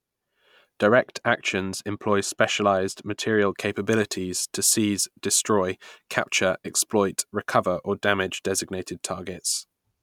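From 0.86 to 3.54 s the speech turns dull and muffled: de-emphasis applied wrongly, a treble cut meant to undo pre-emphasis that wasn't there or was applied twice. Unlike a low-pass filter's abrupt edge, the loss slopes gradually, reaching about 8 dB down at 10 kHz relative to 1 kHz.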